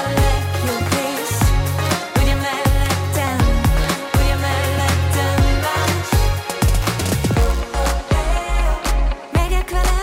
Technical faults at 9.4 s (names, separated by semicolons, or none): none